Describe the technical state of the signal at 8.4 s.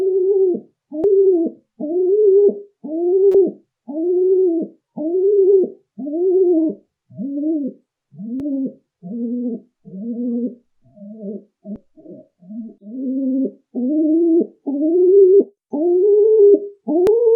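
Damaged data in a compressed stream occurs at 8.40 s, a single very brief event lasting only a few milliseconds. At that point the encoded bytes reaching the decoder were corrupted, whether lost, zeroed or overwritten, so the frame there could not be read correctly. The decoder loses its place in the stream and must hunt for the next valid frame header before normal decoding resumes. What reaches the ear is a short, unnatural chirp or blip.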